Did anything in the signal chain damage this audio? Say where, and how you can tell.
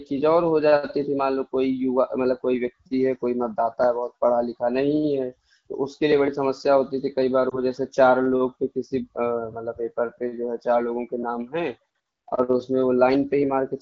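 Yes: lost AMR speech frames in the network stage, 7.49 to 7.59 s. A brief dip or warble fits one concealed 20 ms frame. The spectrogram shows smeared, fading harmonics.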